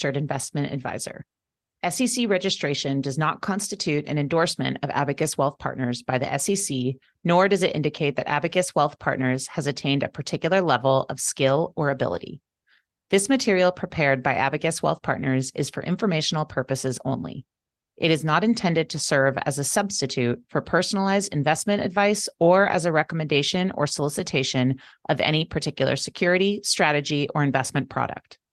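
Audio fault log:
8.45–8.51 s and 12.13–12.19 s, lost packet rebuilt from error correction: about 40 ms, likely two packets, was filled from low-bitrate backup copies, so after "does it indicate that" and "level of skill or" the sound turns briefly rough and noisy, with no gap.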